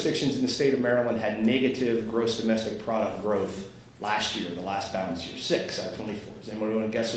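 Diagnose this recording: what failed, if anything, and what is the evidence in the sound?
Nothing failed: the audio shows only the normal marks of a call chain, with the lowest bass trimmed by the microphone processing's high-pass and nothing above 8 kHz, which fits a wideband Opus call path at around 32 kbps working as designed.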